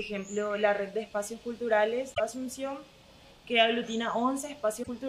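At 2.13 to 2.20 s and 4.80 to 4.89 s, damaged data in a compressed stream makes the decoder lose sync, producing brief glitches seen as waveform discontinuities.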